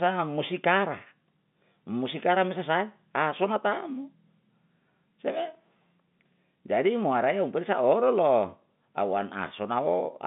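No technical faults are audible.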